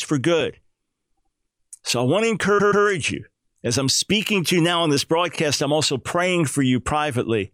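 At 1.16 s the speech catches on itself: a block of about 78 ms plays twice more. That stutter is repeated frames, where a run of compressed frames got written or sent again and the decoder simply replays them. It happens again at 2.58 s with a longer 131 ms block, also repeated twice, and at 5.34 s with a single 26 ms repeat, which fits one codec frame. Together the repeats stretch the clip by about 0.44 s.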